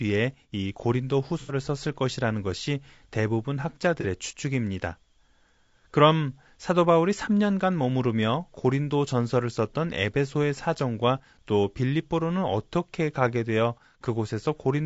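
Throughout, the speech has a rough, grainy texture, with noise between the harmonics and a thin, synthetic-sounding top band, most likely from low-delay AAC compression (AAC-ELD). The damage is plainly audible and points to a bitrate around 32 kbps.

From 1.40 to 1.54 s, about 90 ms of audio is replaced by a smeared, noisy patch. This is AAC frame loss with concealment: the decoder rebuilt the missing stretch from the last good spectrum. A second, shorter loss of 30 ms, from 4.01 to 4.06 s, gives a brief phasey blur. Unlike a plain dropout, neither gap falls silent; both are filled with a noisy stand-in for the missing sound.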